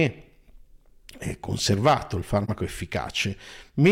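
At 2.44 to 2.50 s, just after "eh conservato il", AAC frame loss with muting leaves a brief 43 ms dip, consistent with one zeroed frame faded out and in.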